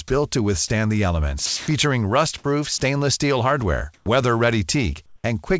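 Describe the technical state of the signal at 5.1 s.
At 5.1 s the sender has likely paused transmission during silence, so the receiver generates comfort noise in place of the background from 5.06 to 5.24 s. For those 0.18 s the real background becomes a steady, featureless hiss, about 3 dB quieter.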